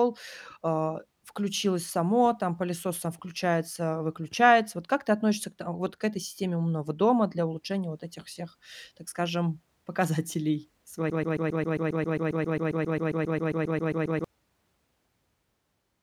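Speech stutters into a rapid, machine-gun repetition from 11.10 to 14.24 s, where one 134 ms fragment plays back to back 23 times: a broken-record loop. The player or stream likely stalled and kept resending its last fragment, so the audio for those three seconds is lost.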